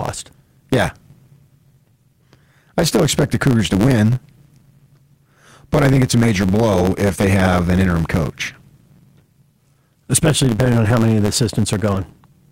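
Speech, affected from start to finish by a block size mismatch (truncated): one stage writes longer blocks than the next reads, so each block's tail is dropped. That produces a steady 109 Hz buzz at the block rate and speech running 1.09 times fast, with timbre essentially unchanged.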